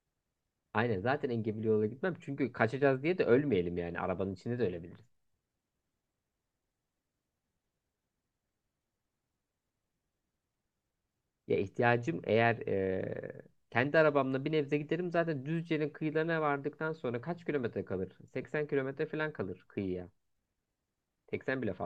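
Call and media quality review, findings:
Lost LE Audio frames, 18.42–18.44 s: brief noisy smear in the speech. LC3 concealment replayed the last spectrum with random signs. Gap fits roughly two 10 ms frames.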